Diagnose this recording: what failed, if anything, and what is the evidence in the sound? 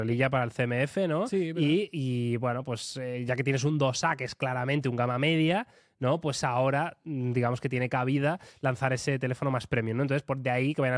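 Nothing failed; the sound holds no evidence of a fault at any stage.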